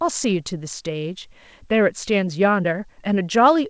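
Nothing here counts as a fault: the speech simply came over an ordinary call path whose wideband codec leaves nothing above 8 kHz, which is just how that sort of call is meant to sound.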